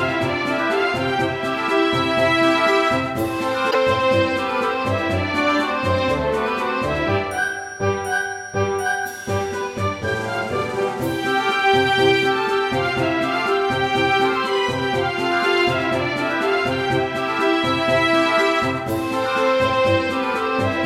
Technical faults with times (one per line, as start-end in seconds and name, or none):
3.70-3.75 broken MP3 bit reservoir